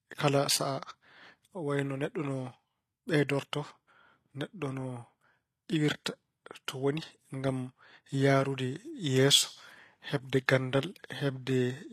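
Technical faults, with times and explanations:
Throughout, HE-AAC compression: the treble of this speech stays bright but sounds synthetic, with s sounds turning gritty and metallic or lispy, and nothing at all above about 14.9 kHz. The likely cause is HE-AAC coding at a low rate, which fits around 24 kbps: only the lower spectrum is coded, and the upper bands are rebuilt by copying lower content upward under a coarse envelope, so the harmonics no longer line up across the crossover.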